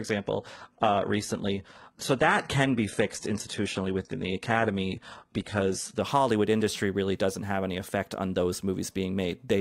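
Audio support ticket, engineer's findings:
Adaptive stream starting at a low bitrate, 0 to 6.0 s: dull, smeary speech, nothing above 11.8 kHz, sounds like a ~16 kbit/s HE-AAC start. Player jumps to a proper AAC tier at 6.0 s, no gap.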